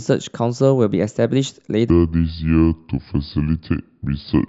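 A short speech clip that starts out fine, then from about 1.90 s to the end it has a wrong sample rate fault: everything suddenly drops to two-thirds speed and sinks about 7 semitones, so the voice turns low and dragging. Speed and pitch sliding together by the same ratio is the giveaway that the samples are being played back without any rate conversion. The 0.667 ratio fits 48 kHz audio being clocked out at 32 kHz.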